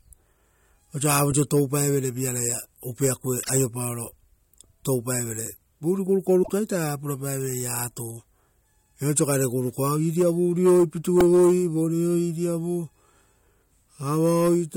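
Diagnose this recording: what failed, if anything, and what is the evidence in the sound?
Codec stage: brief garbled bursts at 3.42–3.50 s and 6.42–6.50 s, each about 75 ms, likely a broken MP3 bit reservoir, with lost 24 ms frames corrupting their successors.

Driver or buffer stage: a short buzzing click at 11.21 s is a repeated buffer. A roughly 1.3 ms slice, which fits a 64-sample buffer, plays five times back to back.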